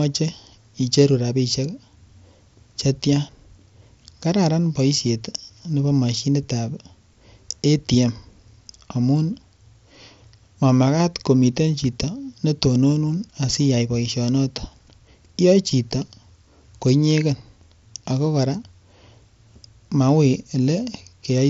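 Nothing's gone wrong in this one; it's just speech coming over a Bluetooth mSBC headset link, and that's all you're hearing.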